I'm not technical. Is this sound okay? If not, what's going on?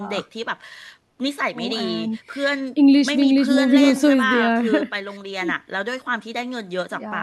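Yes, nothing stood out as a problem when listening to this recording.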